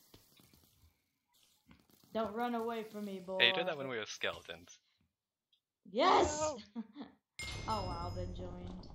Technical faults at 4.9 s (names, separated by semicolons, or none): none